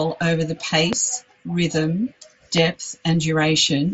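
At 0.93 to 0.95 s, right after "over the", a loud pop cuts sharply through the speech. A second one lands at 2.58 to 2.60 s. Both stand well above the voice, which continues underneath. A voltage spike, likely from a plug, switch or static discharge, would explain them. The speech is band-limited by the Bluetooth mSBC headset codec, with nothing above about 7.7 kHz.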